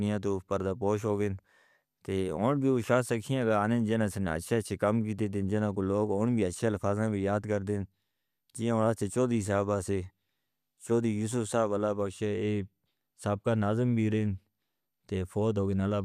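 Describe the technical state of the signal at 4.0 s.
At 4.0 s the signal is intact, with no dropout, distortion, clipping or other fault audible at that moment.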